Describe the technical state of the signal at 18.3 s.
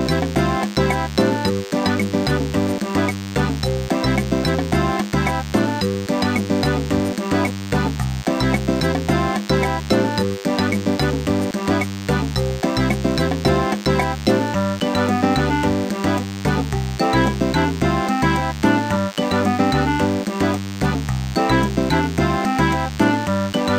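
At 18.3 s, as throughout the clip, DECT cordless phone buzz sits about 20 dB below the signal: a nearby handset or base transmits a radio burst every 10 ms, which the audio circuit rectifies into a thin, steady 100 Hz buzz. A spectrogram shows evenly spaced horizontal harmonic lines at multiples of 100 Hz.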